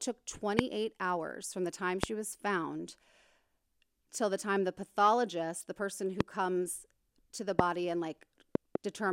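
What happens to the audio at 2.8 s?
Nothing goes wrong at 2.8 s; the speech runs on intact through that moment with no dropout, click, distortion or other fault.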